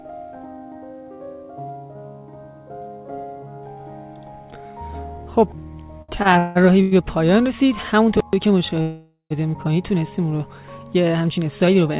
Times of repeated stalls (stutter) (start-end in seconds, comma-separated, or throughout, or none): 6.02-6.93